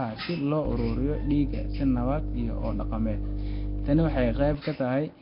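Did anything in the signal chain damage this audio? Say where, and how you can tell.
Yes. Throughout, the speech sounds rough and hissy, with a smeared, underwater quality, and nothing survives above 5.3 kHz. This points to the codec stage, likely Nellymoser compression at around 22 kbps. Starved bands get no bits and are refilled with noise.

A mains hum sits under the speech from 0.65 s to 4.55 s. It is a steady 50 Hz tone, only slightly quieter than the speech. This points to the analogue wiring, where a ground loop or nearby transformer couples the power line in.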